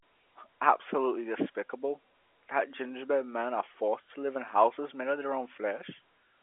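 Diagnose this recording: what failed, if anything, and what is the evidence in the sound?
Nothing in the recording has failed: the speech occupies the ordinary telephone band of about 300 Hz to 3.4 kHz with nothing above about 3.7 kHz and at most a faint trace of coding noise, which fits a normally working G.711 A-law line at 64 kbps.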